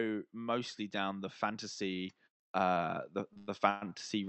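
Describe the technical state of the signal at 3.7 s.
At 3.7 s the jitter buffer is in the middle of a run of repeated stalls (stutter) lasting from 3.33 to 3.93 s. Packets were arriving late or more slowly than playback consumed them, so the buffer emptied four times. Each time the receiver stretched the last bit of sound to cover the wait, about 254 ms in total, with the longest wait near 119 ms. Nothing is lost, but roughly 43% of that stretch is filled-in sound, so the speech drags and stutters.

Underneath the stutter, automatic gain rising is still at work. From 0.35 s to the end of the clip the gain control judged the input too quiet and kept raising its level. Around 3.7 s the speech and the background noise are therefore both still swelling together, slowly growing louder rather than jumping.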